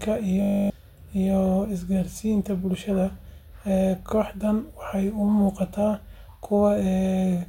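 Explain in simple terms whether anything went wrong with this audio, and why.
The computer froze briefly, a system hang loop, replaying one 20 ms scrap of speech 14 times from 0.42 to 0.7 s: a 50 Hz buzz, losing about a third of a second.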